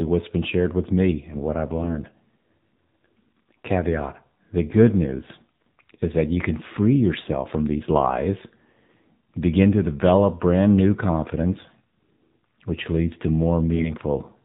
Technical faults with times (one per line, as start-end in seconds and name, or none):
0.00-14.45 AMR narrowband mobile codec
13.76-13.94 AMR bit errors